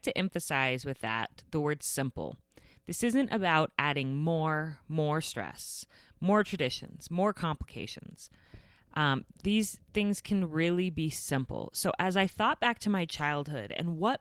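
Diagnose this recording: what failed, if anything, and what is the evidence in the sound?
Lost packets rebuilt from error correction, a network fault recovered at the codec, at 12.23 to 12.37 s, just before "back to my", and again at 13.19 s, just after "back to my". Neither spot has a gap. Instead the speech turns briefly rougher and noisier, for about 80 ms the first time, which fits four separate 20 ms packets, and 20 ms the second, which fits one. The decoder filled each hole with the low-bitrate copy carried in the following packet.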